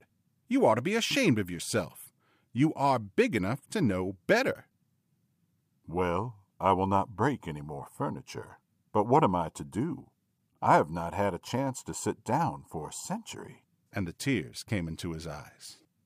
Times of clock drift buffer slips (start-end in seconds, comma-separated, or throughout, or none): none